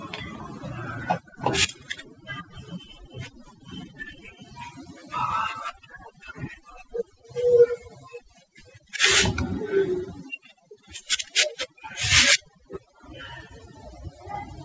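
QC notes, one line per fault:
Throughout, overdone noise removal: over-aggressive noise suppression gates bands near the noise floor, leaving the background broken into twinkling, warbling specks; the spectrogram shows a near-black background with scattered isolated time-frequency specks.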